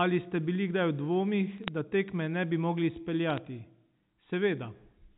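Bit errors on the digital phone line flip stray bits in the G.711 A-law stream, around one bit in a thousand, so single samples jump. From 1.58 to 1.68 s, just before "da tekme ne bi", and from 3.30 to 3.38 s, right after "tekme ne bi mogli", sharp ticks crackle over the unchanged speech.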